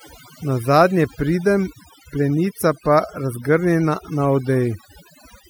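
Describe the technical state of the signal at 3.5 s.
At 3.5 s the speech carries overdone noise removal, present throughout the clip. An overly aggressive noise reducer pulls individual frequency bands down whenever they sit near its noise estimate. Quieter speech detail vanishes with them. The background drops and breaks up into twinkling specks.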